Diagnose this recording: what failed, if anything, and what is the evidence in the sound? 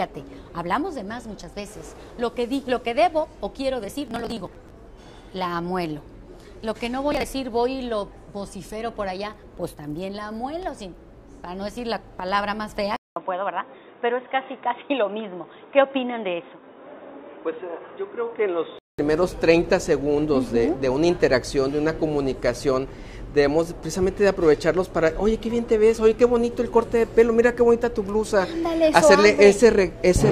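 Processor overload crackle, 3.85 to 4.70 s and 7.12 to 7.24 s, is a driver and buffer stage failure. The processor repeatedly missed its buffer deadlines, and each late buffer was simply skipped. That leaves dozens of tiny hard-edged holes in the sound, which read as a gritty tearing rather than a single click. The spacing fits buffers of around 10 ms. The first burst is the longer of the two.

Input switched to a poorer device, 12.96 to 18.99 s, is an input-routing change at the capture stage. It likely comes from the system moving to a lower-grade microphone or a headset's call profile. The switch opens with a 200 ms silence. After that, nothing above 3.8 kHz survives, so the sound turns dull and boxy. A new noise floor about 45 dB below the signal comes in, while the overall level stays roughly the same. At 18.99 s the full band returns.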